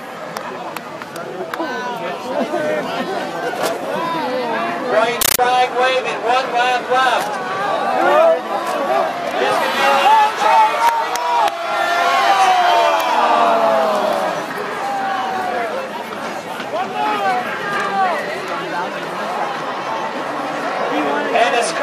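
From 5.21 to 5.39 s the sound is replaced by harsh, very loud chattering static. This is a compressed stream played as audio. An AC-3 bitstream reached the output and was treated as ordinary samples instead of being decoded. Each frame arrives as a burst of noise about 13.3 ms long, then silent padding. The bursts repeat at 31.25 Hz, giving the rapid rattle. The dense bursts fit a 640 kbps stream.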